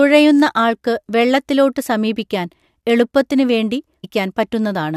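Stream segment skipped at 4.03 s: the speech jumps abruptly forward with a brief blip, as if part of the programme is missing. The likely cause is that one segment of the stream failed to load and the player moved straight on to the next.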